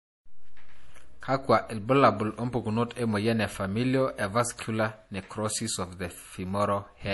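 The speech runs throughout with likely MP3 compression at a low bitrate, near 48 kbps: nothing above 11.5 kHz, and plainly audible watery, swirling damage on s sounds.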